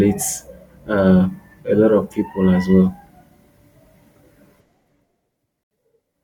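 At 5.63 s the speech cuts abruptly to silence for 74 ms, then resumes at 5.71 s, a pattern that points to a likely Bluetooth stall: delayed wireless packets let the headphones' buffer run empty, so playback halted until the resent data arrived. The gap is clean digital silence with hard edges, with no gradual dip like the smooth level changes heard in the clip and no smeared or repeated filler of the kind packet-loss concealment leaves.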